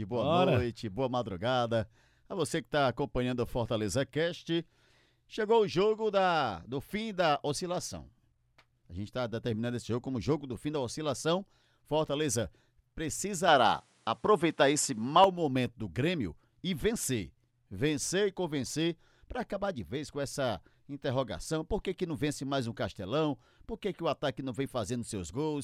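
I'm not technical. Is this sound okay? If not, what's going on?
No. From 13.48 to 15.24 s the speech turns duller, loudness shifts and new background hiss appears, likely an input switched to a poorer device rather than simple muffling.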